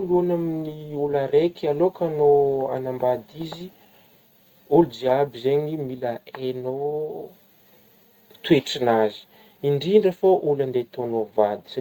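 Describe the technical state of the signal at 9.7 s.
At 9.7 s the speech falls within the repeated timing corrections that run from 0.20 to 11.79 s, with the receiver trimming short pieces to keep pace with a sender running at 104 percent speed. Beneath this sits clock drift between sender and receiver throughout the clip: the sender's clock runs roughly 4 percent fast, so the jitter buffer keeps overfilling and forcing those small, unevenly spaced cuts.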